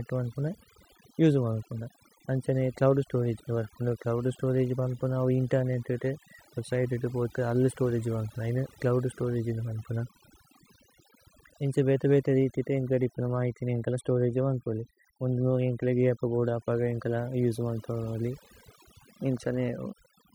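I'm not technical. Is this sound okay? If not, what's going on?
No. From start to finish the background drops away and breaks up into twinkling specks. That's overdone noise removal: a noise-cleaning tool set too strong, carving away quiet parts of the voice along with the background noise.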